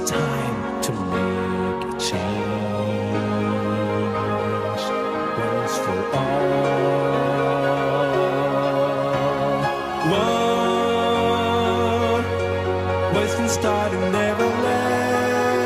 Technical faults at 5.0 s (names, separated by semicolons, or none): none